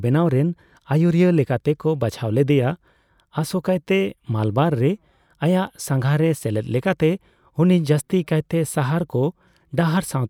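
No faults detected anywhere in the speech recording; nothing to report.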